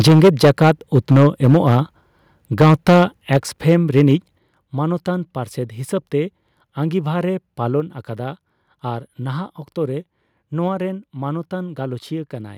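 From 0.0 to 1.75 s the speech shows microphone overload: peaks run about 8 dB past the converter's limit, squaring off roughly a tenth of the waveform and giving the loudest syllables a harsh crackle, likely from input gain set too high. At 0.08 s the microphone volume steps down by about 3 dB, an abrupt drop in voice and background together, likely the call software cutting input gain in response. Overload returns from 2.6 to 3.02 s, about 8 dB over with a larger share of samples flattened, and briefly at 3.35 to 3.37 s, about 3 dB over. Another step down of about 4 dB follows at 3.37 s. A milder overload, about 2 dB over with only a few percent clipped, runs from 3.68 to 4.02 s. A final step down of about 8 dB comes at 4.38 s and is the largest drop in level.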